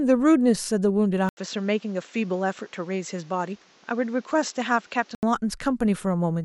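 From 1.29 to 5.23 s the input likely switched to a poorer device, one with a narrower passband. After a brief gap of about 80 ms, the speech loses everything above 7.7 kHz, drops a few decibels in level, and carries a faint new noise floor before the original sound returns.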